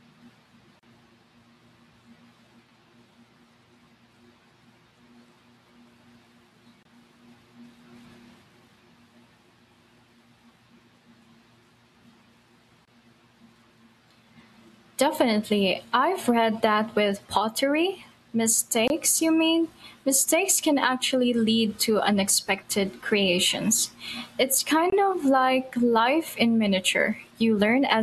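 Gaps at joins of encoded pieces: 35 ms at 0.79 s, then 24 ms silences at 6.83, 12.85, 18.88 (before "you mean") and 24.90 s (before "of like life in"), each from untrimmed encoder padding.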